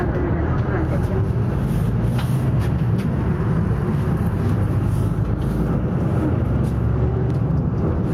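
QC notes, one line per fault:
Throughout: gain pumping. Gain swings about 5 dB, ducking under loud sounds. Likely cause: excessive input gain hitting a fast limiter.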